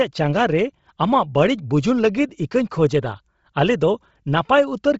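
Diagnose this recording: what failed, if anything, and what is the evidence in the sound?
The codec stage is at fault across the whole clip: the speech has nothing above about 7.7 kHz, and the top of the band sounds breathy and grainy, with heavy damage that is likely Bluetooth LC3 compression at a low rate fitting 24 kbps with 7.5 ms frames. Unlike a clean low-pass, the missing spectrum is replaced with noise.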